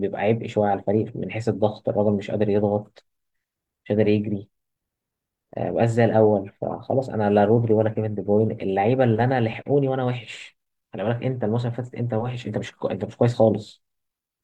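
No technical faults are audible.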